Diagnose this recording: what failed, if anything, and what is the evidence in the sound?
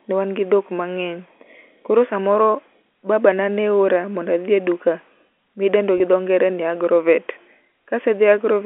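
Packet loss with pitch repetition at the network stage, 5.98 to 6.00 s: a 20 ms gap, fitting a single lost packet, bridged by repeating the last pitch period, heard as a briefly held, buzzy note.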